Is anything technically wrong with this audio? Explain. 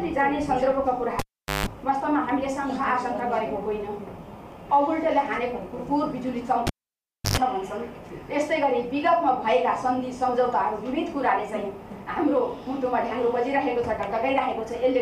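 Yes. A live cable is pulled and plugged in twice, at 1.19 to 1.66 s and again at 6.67 to 7.37 s. Each time the connector breaks contact, so the signal drops with a pop to near silence, for about 0.42 s and then about 0.65 s. As the plug goes back, only the tip touches first, leaving the input open to 50 Hz mains hum. That gives a short buzz, around 160 ms and 100 ms, before a second pop marks full reconnection.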